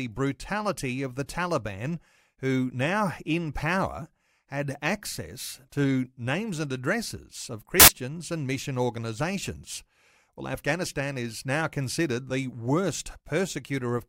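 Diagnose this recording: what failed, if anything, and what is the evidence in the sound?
The sample-format conversion failed: samples built from the wrong bytes, assembled in the wrong order or alignment, so the fast-changing low bits land in the high positions. In this speech, after "names and addresses of", 7.80 to 7.88 s becomes loud, harsh broadband noise before "and mission organizations".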